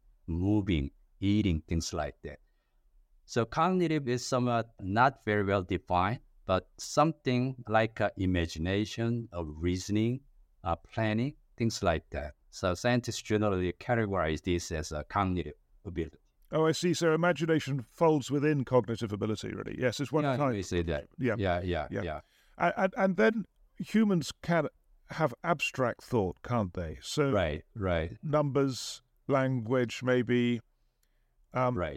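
A listener hears a speech recording with no technical faults anywhere in the signal.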